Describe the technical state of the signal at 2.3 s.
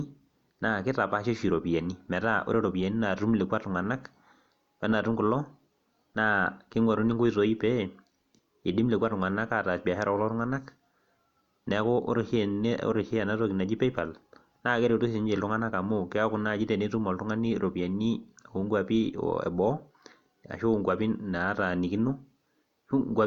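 At 2.3 s the speech signal is intact, with no audible fault at that moment.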